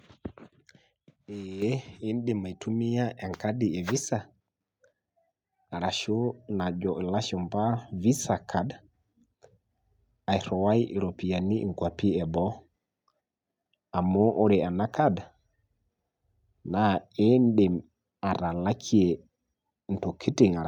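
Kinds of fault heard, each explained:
Microphone volume stepped up: at 1.62 s the input gain jumps about 7 dB in one step, lifting speech and background noise together, unlike a gradual automatic gain ramp.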